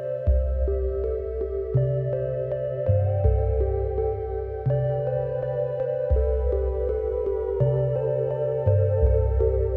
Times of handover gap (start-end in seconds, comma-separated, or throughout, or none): none